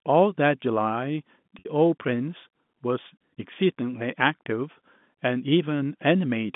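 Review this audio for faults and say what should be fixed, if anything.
At 1.59 s the speech briefly freezes into a held, slightly buzzy tone that lasts about 60 ms, releasing at 1.65 s as normal speech resumes. This is packet loss with pitch repetition: a stretch of audio never arrived, a gap that fits two 30 ms packets, and the receiver filled it by looping the last pitch period and fading it down. The surrounding G.711 telephone band, roughly 150 Hz to 3.6 kHz, carries through cleanly. Adding forward error correction or redundant packets on the network path would prevent it.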